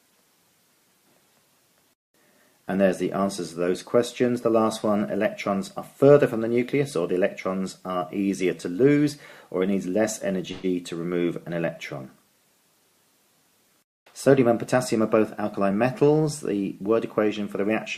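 At 10.51 to 10.69 s a call audio freeze stretches the last sound into a fading buzz for about 119 ms, likely from delayed packets draining the jitter buffer; nothing is lost. From 13.87 to 15.69 s a jitter buffer speed-up trims short pitch-period pieces, running the sound at 105% speed and removing about a tenth of a second.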